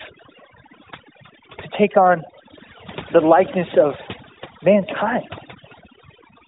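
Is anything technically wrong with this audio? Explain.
Yes. Overdone noise removal runs through the whole speech clip. The suppressor pushes individual frequency bands down whenever they resemble its noise estimate, so the background drops and breaks up into twinkling specks and quiet parts of the voice go with it. Unlike codec warble, the damage tracks the noise floor, not bitrate. The narrowband phone path, with nothing above 3.8 kHz, fits AMR-NB at its 12.2 kbps mode.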